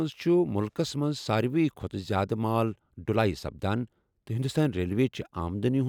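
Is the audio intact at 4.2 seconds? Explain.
Yes, the speech at 4.2 seconds is intact, with no dropout, click, distortion or other fault at that moment.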